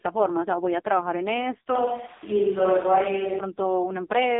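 Throughout, the speech passes through an AMR narrowband mobile codec. Nothing above 3.7 kHz survives. The heavy, buzzy, synthetic damage points to a very low bitrate, around 5 kbps.

From 1.75 to 3.39 s, the speech turns suddenly roomy and hollow, with thinner bass and audible room noise. Level barely changes. A switch to a distant microphone is the likely cause.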